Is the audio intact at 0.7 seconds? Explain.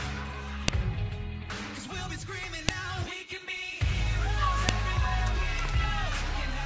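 No. At 0.68 s a file header played as audio: a joined piece kept its header bytes, which play as samples and produce a sharp, loud click.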